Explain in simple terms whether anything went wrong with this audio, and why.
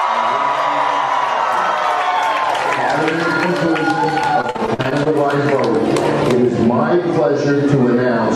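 From 4.41 to 5.07 s there was repeated packet loss. Data kept going missing, and each gap was patched by repeating earlier sound, making it choppy and robotic.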